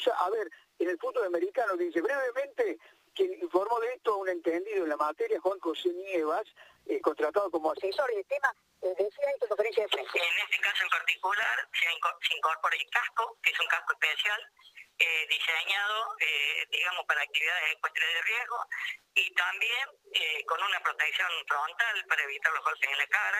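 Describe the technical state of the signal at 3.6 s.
At 3.6 s the signal is intact, with no audible fault at that moment.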